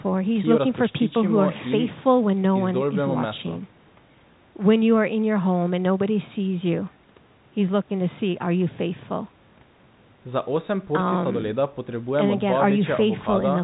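No technical faults can be heard in the speech, which has the narrow sound of a phone call: the call microphone processing takes out the lowest bass, and G.711 mu-law telephone coding at 64 kbps passes nothing above 4 kHz, with its level-following quantisation noise faint at most.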